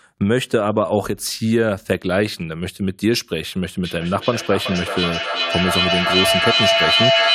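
From 3.85 s to the end of the clip there is feedback echo between two devices. Two devices in the same room are on one call, so one device plays out what the other's microphone sent, and that microphone picks it up again. Each echo canceller only removes its own device's playback, so the loop stays open. The speech comes back at an interval of roughly 400 ms, and the repeats build up instead of dying away, reaching about 2 dB above the speech itself.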